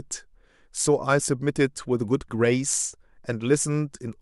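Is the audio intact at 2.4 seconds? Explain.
Yes, the speech at 2.4 s plays through cleanly, with no dropout, click, distortion or other fault at that moment.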